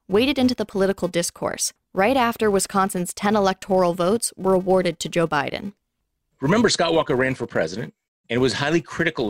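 It's a speech clip, and from start to finish there's a steady buzz riding under it at 345 Hz that rises and falls with the level of the speech. That's the classic sign of a filter restarted on every block: the filter drops its memory at each block boundary and starts again from silence, so every block opens with a tiny transient. A 345 Hz repeat rate fits a 128-sample block.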